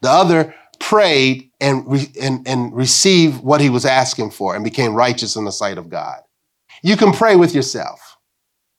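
No technical faults can be heard in this speech.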